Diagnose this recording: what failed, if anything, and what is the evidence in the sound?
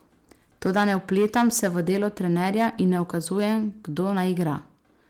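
Hard clipping at a converter or sample-format stage, present throughout: the speech peaks are driven about 7 dB past full scale, so a small fraction of samples are cut flat and the loudest syllables carry a harsh crackle. Unlike codec distortion, the roughness tracks level and appears only on peaks.

A block of digital silence at 2.79 s points to the driver or buffer stage: the signal drops to silence for about 0.67 ms, which fits a 32-sample block left unfilled, and returns abruptly. The result is a tick or dip rather than a dropout. No fade and no packet-loss smearing from the Opus stream separate it from a network gap.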